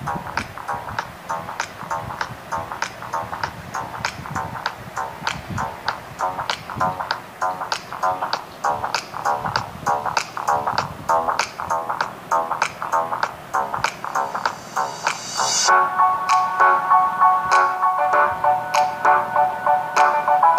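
From start to finish, the audio was likely reduced to low bit depth without dither, with samples rounded to a coarse grid that points to about 8 bits. The error tracks the signal, so quiet passages turn grainy, with distortion sitting roughly 30 dB below the level.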